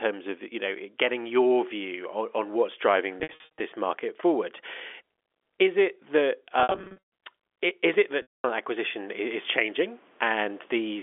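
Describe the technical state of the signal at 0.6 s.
At 0.6 s the speech is intact, carried through the G.711 telephone path with its usual narrow line band of roughly 300 Hz to 3.5 kHz and no fault audible at that moment.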